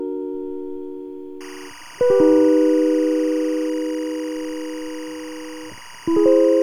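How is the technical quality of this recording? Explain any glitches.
The music is marred by one clear fault that runs through most of the clip. Timecode bleed appears at 1.41 s and continues to the end at 6.63 s. A linear timecode signal from an adjacent track or cable has leaked into the audio path. Its square wave flips between tones near 1 kHz and 2 kHz, and its pacing fits 24-frame timecode. The result is a steady, chirping warble sitting roughly 20 dB below the music.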